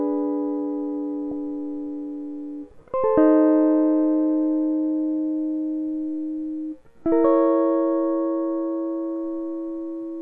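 Throughout, the music sounds dull and granular, with a gurgling roughness and upper frequencies flickering in and out. This is MP2 compression, likely at a low rate of around 80 kbps. Too few bits leave whole upper sub-bands switched off and the rest coarsely quantised.

At 1.31 s, and again from 9.15 to 9.22 s, short blips of noise break over the music. This is DAB burbling: a small share of bit errors slipped past error correction into the MP2 data, so wrong samples put short blips of noise into single sub-bands.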